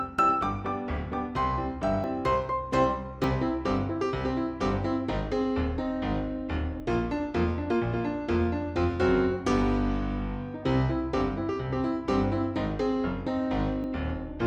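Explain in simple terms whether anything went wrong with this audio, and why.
Four quick breaks interrupt the sound at 2.04, 3.24, 6.8 and 13.84 seconds, each with a small jump forward. The third skips a bit more. These are likely dropped buffers (overrun): the recording software missed short chunks, and the surrounding audio was joined directly.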